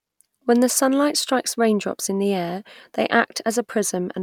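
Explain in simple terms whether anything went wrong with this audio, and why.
Nothing went wrong with this audio, since no fault can be heard anywhere in it.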